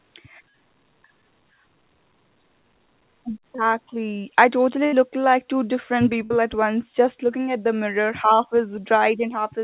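At 3.56 to 3.60 s, a short concealed packet loss: about 20 ms of the call never reached the decoder in time, and the receiver bridged the hole by extending the preceding sound before blending back. It comes through as a brief smear in the speech.

At 4.86 to 4.94 s, between "I totally" and "like two different", a burst of packet loss removes about 60 ms of audio. The receiver carries the last sound forward and fades it over roughly 60 ms. The audio then picks up later, skipping what fell in between. The same burst of packet loss recurs at 6.24 to 6.32 s, between "like two different" and "at once just looking", again losing about 60 ms behind a fading held sound. Above the gaps, the call path's narrowband coding leaves nothing above 4 kHz, which fits G.711 A-law at 64 kbps.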